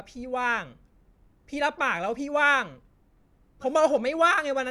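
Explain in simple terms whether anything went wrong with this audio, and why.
Nothing went wrong with the signal in this recording: the speech comes through steady and intact, with no technical faults to point to at any moment.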